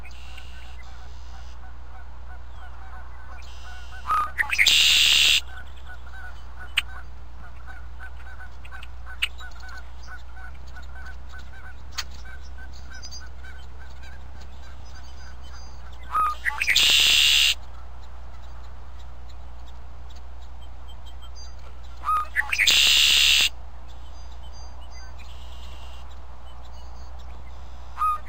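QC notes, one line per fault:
No faults were found in this clip. Nothing in the sound calls for a QC entry.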